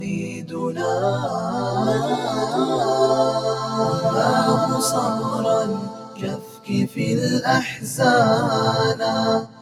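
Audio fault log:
throughout: noise suppressor applied to music or sounds. A speech-tuned suppressor treats sustained tones and ambience as noise, so level swings by around 10 dB. Held material pumps and thins. A spectrogram shows steady partials flickering and tails eaten away, with onsets left intact.
0.00–0.57 s, 5.78–6.69 s, 9.45 s to the end: sound cut by the noise suppressor. These sustained or decaying passages dip by about 6, 7 and 7 dB as the suppressor mistakes them for noise, over roughly 400, 700 and 150 ms. The waveform envelope sags there, and the spectrogram darkens across the band.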